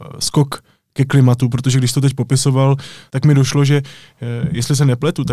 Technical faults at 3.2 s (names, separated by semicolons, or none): none